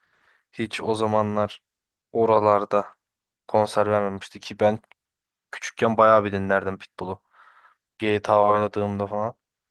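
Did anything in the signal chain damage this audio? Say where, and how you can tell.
No, nothing in the chain has damaged this speech, and the Opus voice compression it went through at 24 kbps still carries the full band, so there's nothing here to track down.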